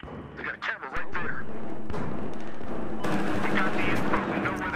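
A DC step begins at 0.97 s and holds until 4.17 s in this audio. The waveform's zero line shifts by about -24 dBFS and sits at that offset before returning to its original baseline. Both transitions come through as low thumps or clicks, while the sound itself carries on unchanged. A jump like this comes from either a converter recalibrating or an input carrying its own offset being switched into the signal path.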